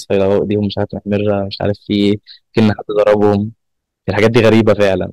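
Hard clipping runs through the whole clip, from start to finish. The speech reaches the stage about 11 dB hotter than it can pass, so every peak above the ceiling is sliced flat, with a few percent of the samples pinned there. Those squared-off tops add harmonics high up the spectrum, and with an overload this large the result is a harsh fuzz riding on each loud syllable rather than an occasional crackle.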